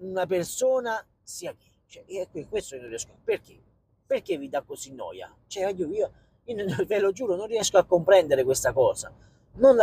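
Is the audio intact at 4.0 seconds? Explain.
Yes, at 4.0 seconds the audio is intact, with no dropout, click, distortion or other fault audible at that moment.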